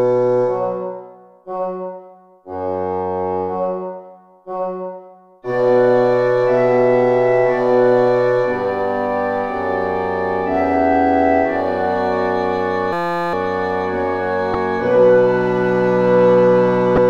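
From 12.93 to 13.33 s, a system hang loop occurs: the driver stalled while the hardware replayed a 5.8 ms ring buffer, consistent with 256 samples, producing a steady 172 Hz buzz. At 14.52–14.55 s and 16.94–16.98 s, damaged data in the compressed stream makes the decoder lose frame sync, giving a brief chirp, squawk, click or short hole.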